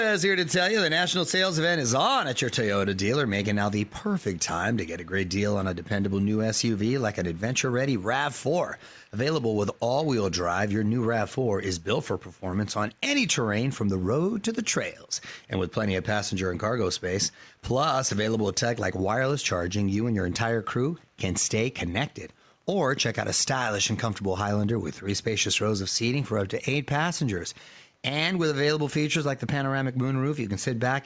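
A faint echo leak trails the speech at 3.85–4.39, 4.74–5.35, 5.82–6.26, 7.33–7.41, 8.77–9.02 and 9.74–10.07 s. It is a very quiet copy arriving 165 ms late, likely loudspeaker sound that the far end's echo canceller missed. On a spectrogram, dim duplicate harmonics lag the syllables in these spans.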